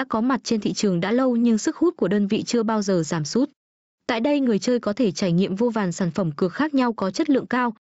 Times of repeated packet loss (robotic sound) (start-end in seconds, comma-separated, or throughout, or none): none